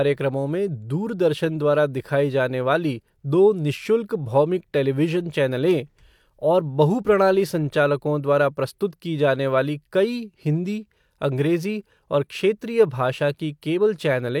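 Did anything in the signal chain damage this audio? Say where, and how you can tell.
No, nothing in the chain damaged this speech.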